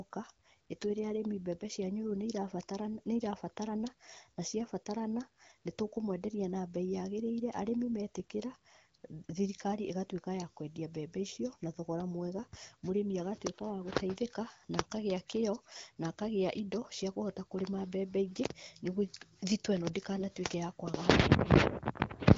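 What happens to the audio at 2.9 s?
Nothing goes wrong at 2.9 s: the speech carries on intact through that moment, with only the light band-limited coloring of the AMR wideband (HD Voice) codec at 12.65 kbit/s.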